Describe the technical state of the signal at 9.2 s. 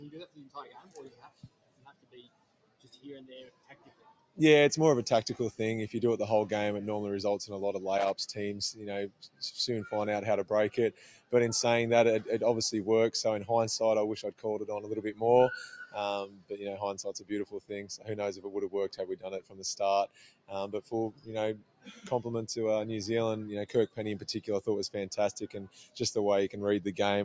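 Sound cut by the noise suppressor, from 8.73 to 9.42 s: a speech-tuned suppressor misreads this stretch as noise and pulls it down, reaching a drop of about 17 dB, so the sound sinks and its decay is cut short while sharper onsets survive. This sits within a noise suppressor applied to music or sounds that stays active throughout, swinging gain by roughly fifteen decibels as it treats sustained and fading material as noise, giving a pumping, thinned character. The band stops near 8 kHz.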